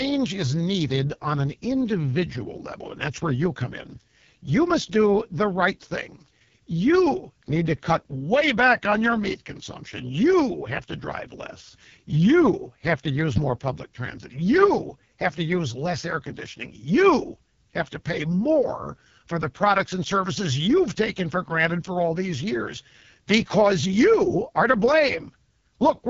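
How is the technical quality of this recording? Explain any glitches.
The technical quality is poor. The speech runs through an AMR wideband (HD Voice) codec at heavy damage for its whole length. The codec models speech up to 6.4 kHz as a pulse-excited vocal tract and fills the top band with shaped noise, with nothing above 7.4 kHz. The rough, raspy texture points to its lowest rate, about 6.6 kbit/s. That upper limit separates it from a narrowband phone codec, which stops near 3.4 kHz, and the grainy rasp separates it from a simple low-pass filter.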